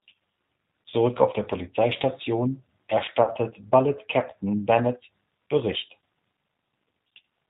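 G.729 codec coding runs through the whole of this speech clip. The damage is plainly audible: nothing above 4 kHz survives, and the voice has the slightly rough, synthetic grain of a codec that rebuilds each 10 ms frame from a vocal tract filter, a pitch predictor and a handful of pulses rather than the waveform itself, which fits the 8 kbit/s G.729A variant. VoIP packet loss concealed by the speech codec occurs at 0.90 to 0.94 s and again at 3.23 to 3.31 s. The first gap covers about 20 ms of lost audio, which fits a single lost packet, and the second about 40 ms, which fits two. At each point the decoder had no new data, so it kept extending its last pitch and filter state with falling gain. The sound smears into a fading buzzy tone or coloured noise, and because each frame depends on the one before, the voice stays weakened and distorted briefly after the packets resume.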